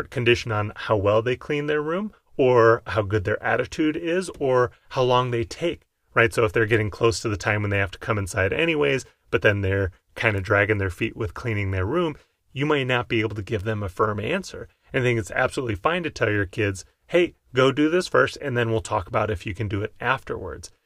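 Nothing technically wrong turns up anywhere in this speech recording; there's simply no fault to point to at any moment.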